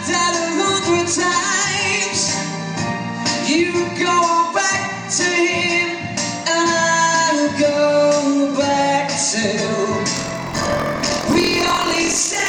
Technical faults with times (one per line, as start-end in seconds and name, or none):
10.15-12.49 buffer tearing